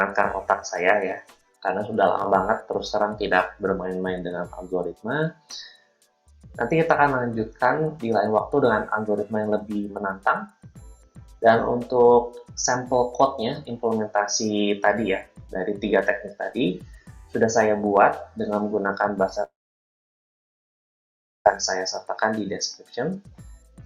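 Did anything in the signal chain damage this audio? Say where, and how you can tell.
Yes. At 19.43 s the network stage likely suffered a long dropout: about 2 s of audio never arrived. The receiver stretched the last sound into a brief fading buzz or hiss, then held near-silence for about 1.9 s until 21.47 s, resuming without the lost stretch.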